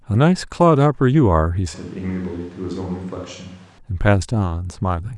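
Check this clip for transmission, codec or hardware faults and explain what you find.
A single fault: from 1.74 s to 3.78 s the speech turns roomy and hollow, with thinner bass, a drop of roughly 10 dB and more audible background noise, then snaps back. This points to a likely switch to a distant microphone, the close microphone dropping out.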